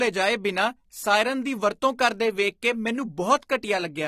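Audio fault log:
Throughout, AAC compression: nothing above 14.1 kHz, with dull, smeared highs and fizzy warbling sibilants, likely low-bitrate AAC-LC near 32 kbps, unlike a clean low-pass filter.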